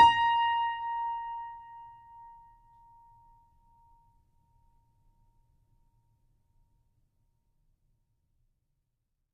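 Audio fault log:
The music signal plays through with nothing in it that departs from normal playback.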